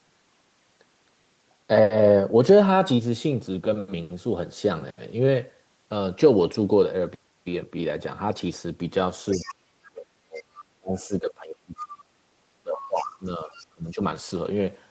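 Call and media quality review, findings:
Other side's voice leaking through, 9.34–9.53 s, 9.85–9.89 s, 10.35–10.43 s, 13.53–13.67 s. Brief scraps of a second voice, faint, roughly 20 to 30 dB under the main talker. Likely an echo canceller leaving residual far-end loudspeaker echo in the mic signal during double talk, passing short bursts through.

Speech suppressed in double talk, 9.35–10.47 s, 10.79–12.02 s, 12.63–14.01 s. Near-end speech dips or drops out in pieces, about a second affected each time. Deepest dips about 35, 30 and 20 dB. Likely echo suppression attenuating the near-end talker along with the echo while both sides talk.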